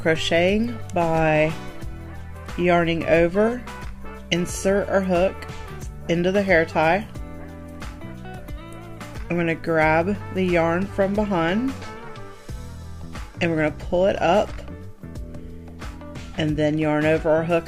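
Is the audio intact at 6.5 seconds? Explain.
Yes, at 6.5 s the audio is intact, with no dropout, click, distortion or other fault at that moment.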